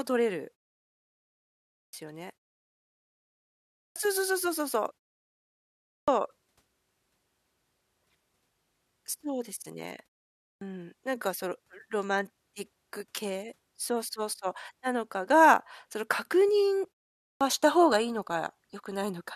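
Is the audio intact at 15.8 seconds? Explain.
Yes, the audio is intact at 15.8 seconds, with no fault at that moment.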